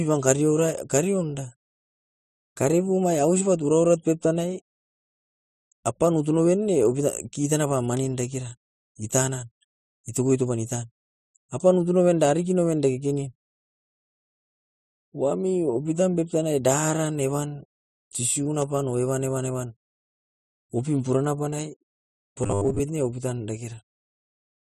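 From 22.43 to 22.80 s, just before "ne opitan", the speech turns robotic. This is robotic sound from repeated short buffers. The voice becomes a rigid, metallic buzz fixed at 100 Hz, while still loosely tracking the words. The likely cause is audio arriving too slowly, so playback loops the most recent 10 ms fragment to fill the gaps. About half of this stretch is repeated material. The real speech in those gaps is lost.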